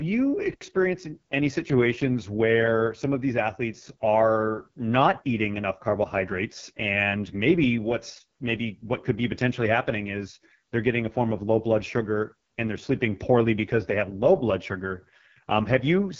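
From start to finish the speech passes through the AMR wideband (HD Voice) codec at what sounds like its lowest operating rate, consistent with about 6.6 kbit/s. At this rate the pulse-excited vocal tract model gets too few bits to describe the waveform properly, so the voice comes out rough and raspy, with heavy coding damage. The band stops near 7.4 kHz, and the top stretch above 6.4 kHz is filled with synthetic noise rather than real detail.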